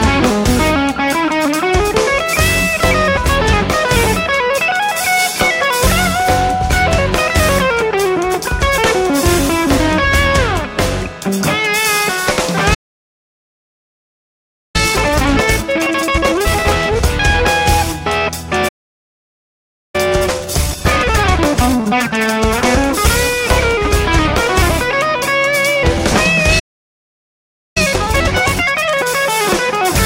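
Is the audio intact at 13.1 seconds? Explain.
No. At 13.1 seconds the player is inside a playback stall running from 12.74 to 14.76 s, likely because it ran out of data or its thread was blocked. The output falls silent for two seconds, cutting the sound off mid-flow before it comes back.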